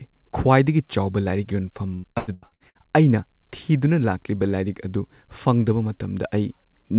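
From 1.94 to 2.78 s, between "ꯈ꯭ꯋꯥꯏꯗꯒꯤ ꯆꯥꯎꯕ ꯂꯥꯏꯔꯤꯛ ꯌꯣꯟꯐꯝ" and "ꯑꯩꯅ ꯊꯤꯗꯨꯅ ꯂꯥꯛꯂꯤꯕ", repeated packet loss (robotic sound) turns the speech choppy. Seven gaps occur, the longest 93 ms, and about half the stretch is filled by stretching out the last sound. On a spectrogram, the concealed gaps appear as frozen, repeated frames under the 4 kHz ceiling of the call path, and the waveform's envelope is flattened there.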